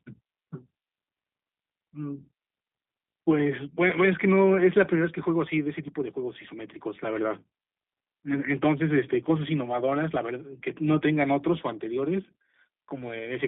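From start to end, the speech carries G.729 codec damage. The sound is rebuilt from a vocal tract model and sparse pulses, which fits about 8 kbit/s. It sounds rough and synthetic. The band runs only from 200 Hz to 3.6 kHz, so it is thin and muffled.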